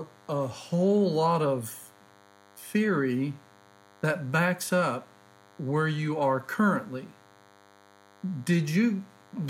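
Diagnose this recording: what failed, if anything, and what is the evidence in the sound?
Analogue wiring stage: DECT cordless phone buzz runs under the speech throughout, a thin 100 Hz buzz rich in harmonics, quiet relative to the voice. Nearby DECT bursts every 10 ms are being rectified in the audio circuitry.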